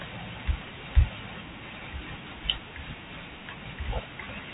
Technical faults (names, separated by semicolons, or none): none